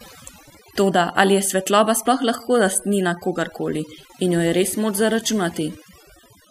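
From start to finish, overdone noise removal is at work: a noise reduction stage was pushed too hard on a noisy recording, so any frequency band sitting close to its noise estimate is pulled far down or shut off entirely, and the softer parts of the speech are cut away along with the noise. Between phrases the background collapses to near silence dotted with twinkling, chirpy specks.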